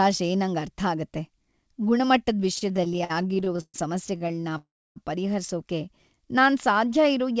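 Starting at 2.56 s and running to 3.76 s, the speech hits repeated stalls (stutter). Packets kept showing up late, so the jitter buffer kept running dry and the receiver had to stretch out the last bit of sound each time. That's well over a dozen little hitches, the longest about 132 ms, and roughly a third of that stretch is filler. Nothing's actually lost, but the speech drags and stumbles along.

A second, shorter bout of stutter runs from 4.18 s to 4.55 s. The hitches here are smaller, none longer than 30 ms, and about a quarter of the span is stretched sound. It's a quicker, jittery catch than the first one.

Right after that, at 4.57 s, there's a call audio freeze lasting until 4.98 s. The last sound gets carried on briefly and then drops to silence for about 0.29 s before the speech picks up where it left off. The likely cause is packets held up in transit emptying the buffer, which would put roughly 0.38 s of gap and extra delay into the audio.

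From 6.10 s to 6.85 s there's a jitter buffer slow-down. The buffer was topping itself back up by repeating tiny pitch-period chunks, adding about 65 ms. The speech plays at about 92% speed with the pitch unchanged, so it comes across as slightly drawn out. The call path's G.722 coding is audible throughout as a ceiling at 8 kHz.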